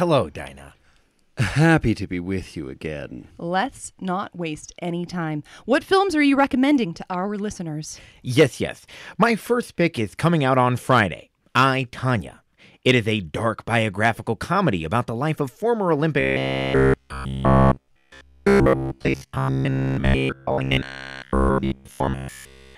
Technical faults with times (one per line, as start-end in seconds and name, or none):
16.20-22.77 robotic sound from repeated short buffers